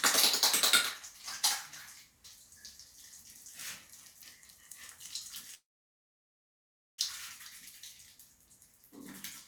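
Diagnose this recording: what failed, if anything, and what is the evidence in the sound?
A call audio freeze sits at the network stage: at 5.54 s the sound stops, a brief held tail gives way to about 1.37 s of silence, and it resumes at 6.99 s exactly where it left off. Nothing is lost; roughly 1.4 s is inserted, most likely because delayed packets drained the jitter buffer.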